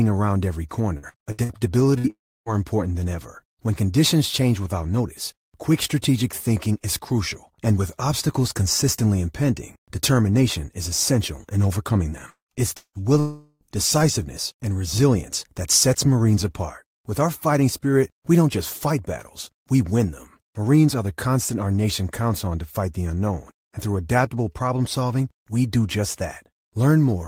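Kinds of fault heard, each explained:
Repeated packet loss (robotic sound): The speech turns choppy, with small pieces missing and brief held fragments between them. This happens from 0.97 to 1.58 s, just after "around every", across five gaps of up to 60 ms, and from 12.30 to 13.05 s, after "essential in overcoming them", across four gaps, the longest 176 ms. Each time about half the stretch is filler, because packets kept going missing and the receiver padded each hole by extending the last sound.
Burst of packet loss: At 1.98 to 2.07 s the speech briefly freezes into a short held, fading sound before carrying on. When it resumes, about 60 ms of speech has been skipped. Several consecutive packets failed to arrive in time, so the receiver stretched the last received audio across the hole while lowering its level. The speech then picked up from a later point, without the lost material.
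Long network dropout: From 2.10 to 2.49 s, just before "important than ever", the speech smears into a fading tail and then goes silent for about 0.29 s. At 13.20 to 13.64 s a similar gap is filled almost entirely by a decaying continuation, with only a trace of silence. Roughly 0.36 s and 0.42 s of speech are gone. The likely cause is a network interruption during which no audio reached the receiver.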